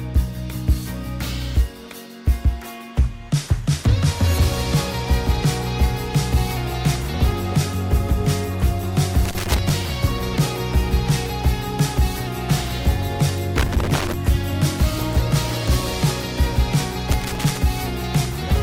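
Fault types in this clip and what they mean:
Loose connector crackle: Three irregular bursts of crackle and scratching break into the sound, from 9.25 to 9.70 s, 13.56 to 14.14 s and 17.11 to 17.57 s, each lasting roughly half a second. A worn or dirty contact somewhere in the signal chain is making and breaking as it shifts, so the audio is chopped on and off in rapid, uneven fragments, giving that rough, grating texture rather than a clean dropout.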